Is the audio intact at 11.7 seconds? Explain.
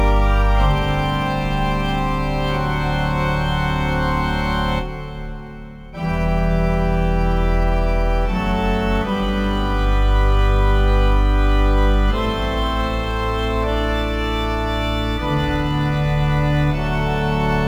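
No. Crude rate conversion runs through the whole clip, including 11.7 s. Samples were dropped without filtering, which fits a 48 kHz to 44.1 kHz change. That leaves error tones around 35 dB below the signal, heard as an inharmonic fizz following loud, bright passages.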